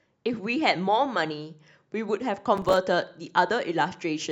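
From 2.57 to 2.77 s, processor overload crackle tears through the speech. The processor misses a run of deadlines for buffers of a few milliseconds, around ten of them. Each miss drops in a brief hard-edged silence. Together they sound like gritty crackle.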